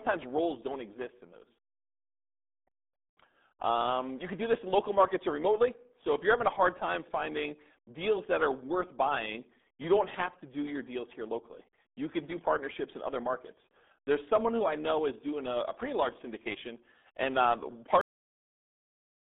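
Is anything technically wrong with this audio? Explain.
Yes, two problems. Throughout, the speech has the RealAudio 14.4 codec sound: squeezed into roughly 200 Hz to 3.6 kHz with nothing above 3.8 kHz, muffled and gargly, which fits an 8 kbit/s dial-up codec crushing the detail. Then there's a cut-off end. Right after "large syndication and um", at 18.01 s, the audio stops dead mid-sound and drops to digital silence with no decay, because the final buffers never got written out.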